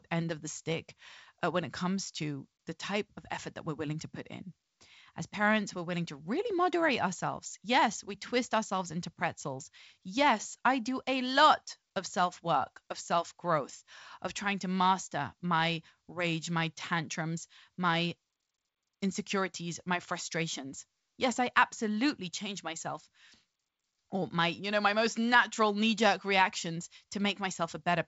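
Nothing stood out on listening to this speech, which comes through G.722 wideband telephone coding at 56 kbit/s with a faint upper-band hiss and nothing above about 7.7 kHz.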